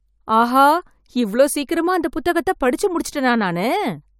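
No technical faults are audible anywhere in this speech.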